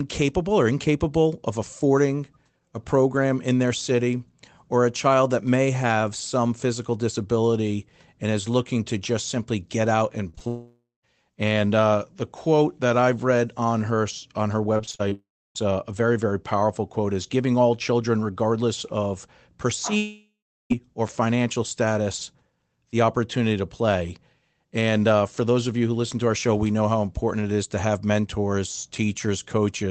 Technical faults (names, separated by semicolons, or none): short concealed packet loss; long network dropout; repeated packet loss (robotic sound)